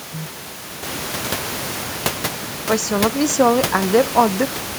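From 1.84 s to 3.88 s the speech shows overdone noise removal. The noise reduction is working far too hard against the room noise, which rises by about 18 dB at around one second and then sits only about 11 dB below the speech. Bands close to that noise estimate are cut almost to nothing, along with the softer parts of the speech. The background collapses into near silence with sparkling specks.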